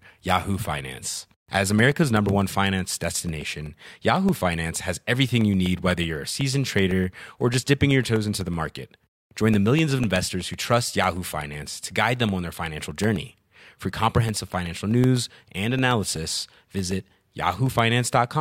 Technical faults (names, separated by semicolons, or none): periodic USB or driver dropouts